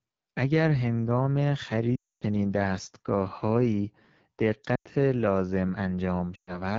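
Throughout this speech recording the voice sounds rough and raspy, with a hissy top end. These are hallmarks of the AMR wideband (HD Voice) codec at a low rate, consistent with roughly 8.85 kbit/s, where the pulse-driven vocal tract model lacks bits and the band above 6.4 kHz is only shaped noise. Lost AMR speech frames cause three dropouts, from 1.96 to 2.24 s, 4.76 to 4.88 s and 6.35 to 6.62 s. In each, the sound drops to near silence within two frames before returning weak or rough for a moment, because the decoder repeated its last good pitch and vocal tract settings at falling gain after corrupted frames failed their checksum.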